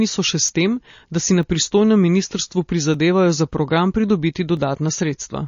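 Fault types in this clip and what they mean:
MP3 compression: likely a low-bitrate encode, around 32 kbps, starving the encoder of bits, so the treble is cut off and the speech sounds plainly watery and swirly.
dropped samples: likely a few samples, under a millisecond, lost from the stream, making the waveform jump; heard as sharp clicks after "so še", "tem da si na", "si na pristojnem ministrstvu" and at 4.57 s.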